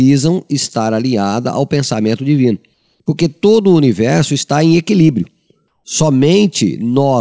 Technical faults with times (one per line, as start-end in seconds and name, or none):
2.74-3.00 comfort noise in place of the background
5.68-5.84 comfort noise in place of the background